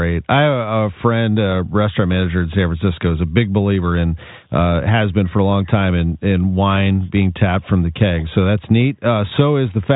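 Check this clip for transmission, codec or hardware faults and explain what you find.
I find no transmission, codec or hardware faults in this clip.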